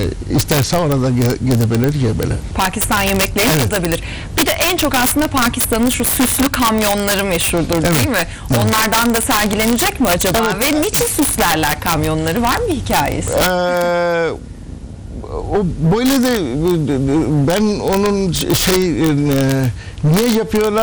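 Integer overflow runs through the whole clip: with gain about 3 dB too hot, the loudest peaks, under one percent of samples, wrap to the opposite sign instead of limiting. Each gives a violent crack, a full-scale sign flip on the waveform and a broadband vertical streak on the spectrogram.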